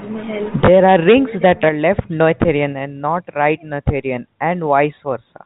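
Speech over a telephone-band link, with one fault: packet loss with the last packet repeated at 0.66 s, just before "are rings that are". A single 20 ms packet is replayed, causing a small blip rather than a silent dropout.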